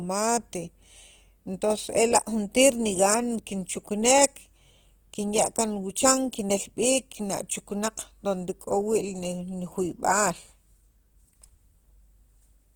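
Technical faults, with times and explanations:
throughout: Opus compression; the speech sounds plainly grainy, rough and noisy, likely from band folding and noise filling, which fits CELT mode at around 16 kbps.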